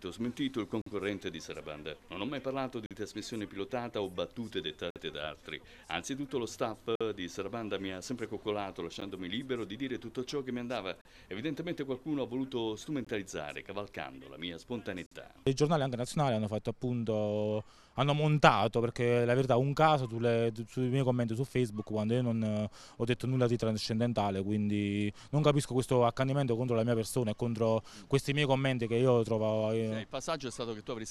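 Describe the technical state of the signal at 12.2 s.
At 12.2 s the signal is intact, with no dropout, distortion, glitch or other fault present at that point.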